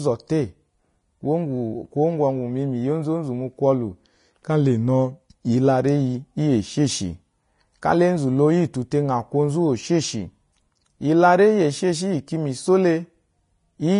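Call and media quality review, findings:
Whole clip, speech: hissy, grainy treble, roughened tones, softened consonant attacks. Nothing above 10.5 kHz. Likely Vorbis compression at a low setting, which fits around 30 kbps. Coarse treble quantisation turns fine detail into matching-energy noise; lowered cut-off removes the top band.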